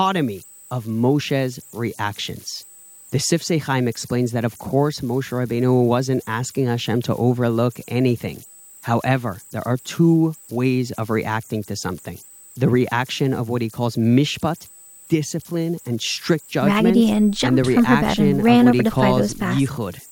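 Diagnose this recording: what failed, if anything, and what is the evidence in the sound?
The converter stage failed, producing converter idle tones across the whole speech recording. A whistle around 7 kHz sits in the pauses, with grainy noise about 26 dB below the speech. Undithered delta-sigma modulation locks into repeating bit patterns at low levels. A spectrogram would show a thin horizontal line near 7 kHz.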